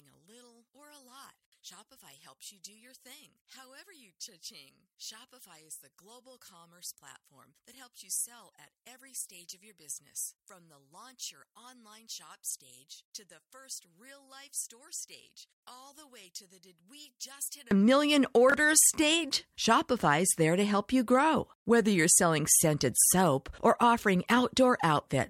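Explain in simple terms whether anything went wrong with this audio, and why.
Two things went wrong here.

From the start until 17.71 s the voice is very quiet, as if most of it has drained away, and then it returns to full strength. The likely cause is one channel inverted: one side of the stereo is flipped upside down, so the shared centre voice cancels when both sides are combined.

At 12.50–12.54 s and again at 18.50–18.54 s there are brief jumbled blips. These are chunks out of order: a sliver of sound about 21 milliseconds long plays one slot late, swapping places with its neighbour. Unlike a dropout, nothing is missing. The pieces are only in the wrong order.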